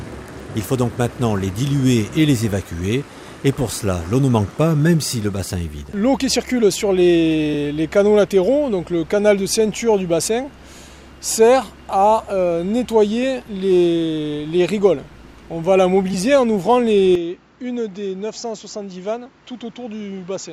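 Damaged data in a compressed stream causes brief blips at 5.12, 7.53 and 16.13 s. Each time the decoder hits corrupted bytes, misreads the frame, loses sync and skips ahead to the next valid header, leaving a short glitch.

From 17.15 s the sound drops by about 10 dB with no gap and turns dull, with nothing above 7.6 kHz and a new noise floor about 45 dB down. This points to the input likely being switched to a poorer device, a narrower-band input with its own tone and noise.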